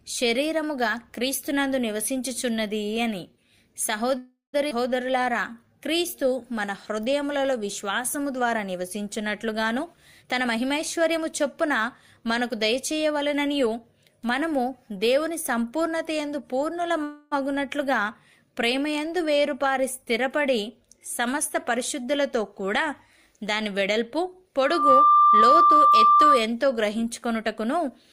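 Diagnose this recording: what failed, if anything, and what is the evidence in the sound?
Network stage, a call audio freeze, likely from packets stalling and the jitter buffer running dry: at 4.17–4.55 s the last sound stretches into a fading fill ending in silence, and at 17.04–17.33 s a shorter fill; nothing is lost afterwards.

Network or jitter buffer, a skip ahead: at 4.69–4.73 s playback jumps forward almost seamlessly, dropping about a fifth of a second of audio.

Jitter buffer slow-down: from 5.07 to 8.22 s the buffer rebuilds its reserve by repeating pitch periods, so the audio plays at 94% speed without any pitch change.

Jitter buffer speed-up: from 9.77 to 13.67 s excess buffered audio is trimmed, around 0.4 s in total, so playback runs hurried at 109% speed.

Acoustic loop between loudspeaker and microphone, a loudspeaker feedback squeal: at 24.60–26.47 s a 1.2 kHz tone swells within about a third of a second to roughly 10 dB above the signal.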